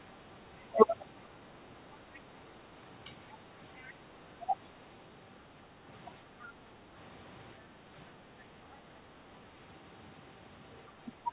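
At 2.14 to 2.19 s a faint second voice flickers in beneath the talker, roughly 30 dB down, in scraps. This is the other side's voice leaking through, likely because the talker's loudspeaker output reached the microphone and the echo canceller left a residue. The leak is confined to the narrow band the call path carries, with nothing above 4 kHz, which fits a G.711 narrowband link.

At 3.33 to 3.38 s the talker's voice sags briefly, a shallow dip of a few decibels lasting about 50 ms, as if pulled back for an instant. This is speech suppressed in double talk. The likely cause is both sides speaking at once, so that the echo canceller could not tell the talker from the loudspeaker echo and turned the whole signal down.

The leaking voice returns from 3.81 to 3.92 s, somewhat stronger at around 25 dB below the speech and lasting about a tenth of a second. It surfaces once more at 4.66 to 4.70 s, very faint at roughly 40 dB down. 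Both are likely further fragments of the same uncancelled loudspeaker echo.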